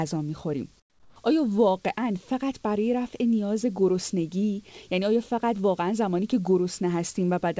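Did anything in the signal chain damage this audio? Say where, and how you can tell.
Yes. From 0.80 to 1.16 s, a 360 ms pause in the speech loses its real background, which already sits about 35 dB below the loudest parts. It drops by about 11 dB into a steady, detail-free hiss until the sound resumes. That is comfort noise in place of the background, likely from discontinuous transmission in the call processing: the sender went quiet during the pause and the receiver filled it with synthetic noise. The absence of anything above 8 kHz fits a G.722 call path at 64 kbps.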